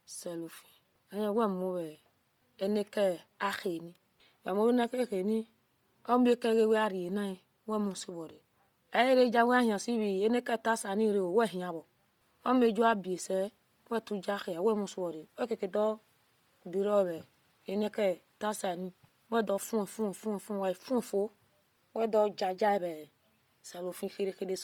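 Throughout the speech, the upper spectrum sounds stripped and refilled with noise, giving a breathy, grainy edge, with nothing above 20.2 kHz. This is likely Bluetooth LC3 compression. The heavy damage points to a low rate near 32 kbps with 10 ms frames.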